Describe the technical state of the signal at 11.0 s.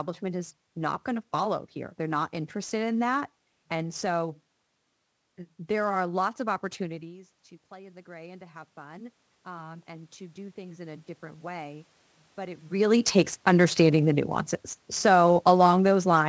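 At 11.0 s, automatic gain rising is in progress. From 6.82 to 12.71 s, after "there are lots of" and until "takes understanding the nuances", the control raises its gain by about 11 dB. It is reacting to an input that fell by about 19 dB when the talker moved back around 7.0 s. Voice and background swell together slowly.

Sample clock jitter runs throughout. The converter clock wanders by a few microseconds, so timing errors land around 30 dB below the signal. The result is a hiss or roughness that grows on loud, bright passages.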